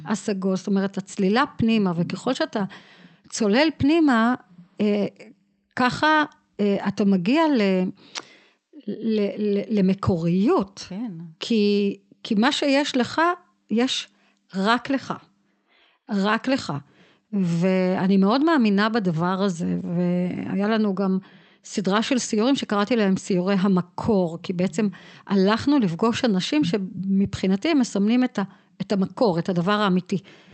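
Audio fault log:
Nothing stood out on listening to this speech recording.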